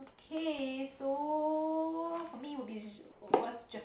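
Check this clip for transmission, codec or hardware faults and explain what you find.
One fault stands out: comfort noise in place of the background, from 3.12 to 3.22 s. For those 100 ms the room's textured background gives way to a steady, featureless hiss about 9 dB quieter, likely because discontinuous transmission paused and the receiver synthesised filler. Unlike a dropout or noise gate, the gap never goes silent.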